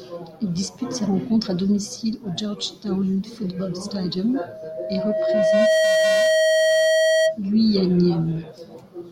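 From 4.47 s to 7.38 s a loudspeaker feedback squeal rises on a single 637 Hz tone, swelling over roughly a second and a half to about 5 dB above the speech. The microphone was re-amplifying its own loudspeaker, so the howl grows on its own rather than being a steady, fixed-level hum.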